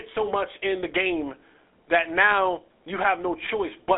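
From start to finish the speech sounds buzzy and gravelly, confined to a telephone band of 250 Hz to 3.5 kHz with nothing above 3.8 kHz. That is GSM full-rate coding: a vocal-tract model driven by coarse, regularly spaced pulses, consistent with a 13 kbps stream.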